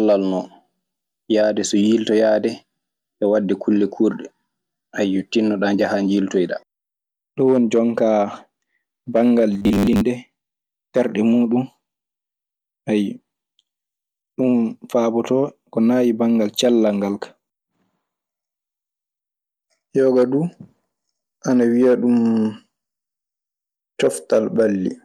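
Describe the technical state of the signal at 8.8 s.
The signal at 8.8 s is intact, with no fault audible at that point.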